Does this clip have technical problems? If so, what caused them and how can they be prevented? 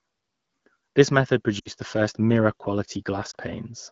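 Yes. There are lost AMR speech frames at 1.59 to 1.70 s, just before "the first", and again at 3.31 to 3.35 s. Radio errors corrupted frames, so the wideband decoder (its light coding fits about 12.65 kbit/s) reused its last pitch and vocal tract settings at falling gain. The first gap, about 60 ms, fits three lost frames; the second fits one. On a spectrogram the harmonics freeze and fade; the waveform envelope dips. Better radio coverage and stronger channel error protection prevent it.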